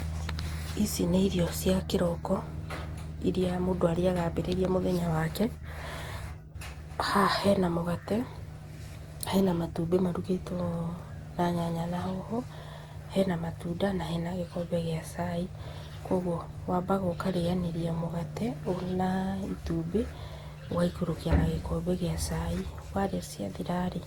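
From start to finish the speech sounds swirly, smeared and hollow. Consonant attacks blur. Content still reaches about 20.1 kHz, so the damage is not a lowered bandwidth. The texture fits generation loss, likely from roughly seven passes through a lossy codec around Opus at 64 kbit/s. Each decode and re-encode quantised the sound again on a shifted frame grid. Noise stacked up with every pass.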